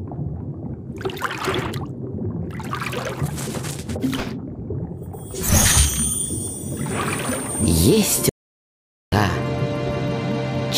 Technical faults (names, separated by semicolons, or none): playback stall